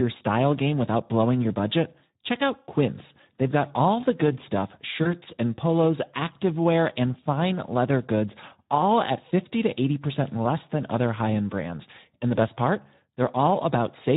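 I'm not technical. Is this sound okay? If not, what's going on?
No. The whole clip is affected by the Speex codec, an older internet-call speech format squeezed hard here, so the voice sounds hoarse and noisy from start to finish.

There are also two spots of VoIP packet loss concealed by the speech codec. Around 5.04 to 5.15 seconds, after "good stuff" and before "and polos activewear and", and again around 12.35 to 12.39 seconds, just before "best part", a tiny piece of the call went missing. The playback stretched the previous sound into a brief smear that fades, unlike the steady roughness of the codec.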